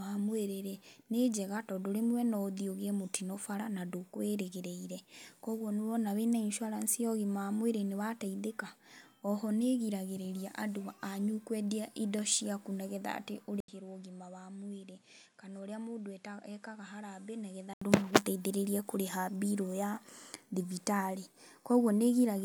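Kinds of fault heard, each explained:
Input switched to a poorer device: from 13.6 s to 17.8 s the speech drops about 5 dB, loses everything above 11.4 kHz and gains a new noise floor roughly 35 dB down, after an 80 ms gap, likely a change to another input device.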